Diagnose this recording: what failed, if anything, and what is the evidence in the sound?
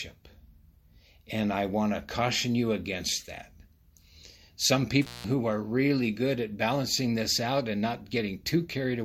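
The fault is an intermittent contact in the analogue wiring. At 5.02 s the speech cuts out abruptly with a crackle, and it returns at 5.24 s with another crackle. The line stays open for about 182 ms, and faint hiss remains during that gap. A loose plug or cable conductor briefly lost contact and broke the signal path. The crackles come from the contact scraping as it separated and then reseated.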